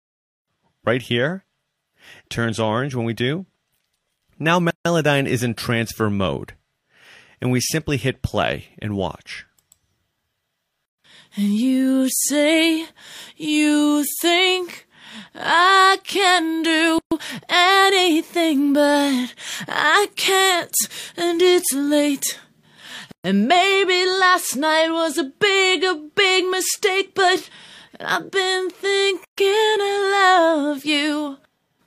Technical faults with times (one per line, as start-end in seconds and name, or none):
4.71-4.85 gap at a join of encoded pieces
10.85-10.98 gap at a join of encoded pieces
16.98-17.11 gap at a join of encoded pieces
23.11-23.25 gap at a join of encoded pieces
29.25-29.38 gap at a join of encoded pieces